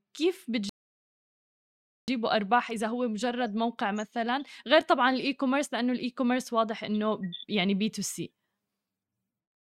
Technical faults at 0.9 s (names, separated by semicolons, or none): rebuffering stall